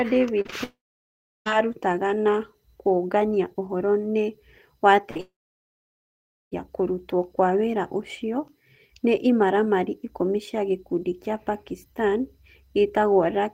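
Short concealed packet loss hits at 0.41 to 0.54 s as three back-to-back gaps, each about 20 to 40 ms, heard as brief smears where the decoder extrapolates the missing audio. From 0.64 to 1.48 s comes a long network dropout, likely from lost packets. A fading buzz or hiss gives way to about 0.7 s of silence before "aarutaga na kũũngania ũhoro". Further short losses at 5.02 s and 5.17 s bracket a burst of packet loss at 5.11 to 5.17 s, where roughly 40 ms goes missing and is filled with a decaying held sound. A second long dropout then runs from 5.21 to 6.68 s, again likely network loss, with about 1.2 s of silence before "kũrutwo kwa wĩra ũcio".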